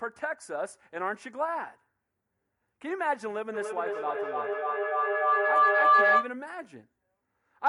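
From 3.54 s to 6.39 s a piercing tone near 1 kHz swells over the speech, pulsing roughly every third of a second and peaking about 10 dB above it: feedback howl, where a microphone-to-loudspeaker loop gains level each pass until it rings.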